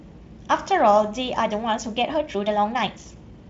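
From 1.3 s to the end, the speech abruptly runs faster, at about 1.36 times its earlier pace, yet its pitch stays where it was, with a rushed delivery. This is a time-stretched section, likely produced by software squeezing the audio to fit a length by dropping short pieces while preserving pitch. A plain playback-speed or sample-rate error would instead raise the pitch along with the tempo. The faint Speex coding plays no part in this change.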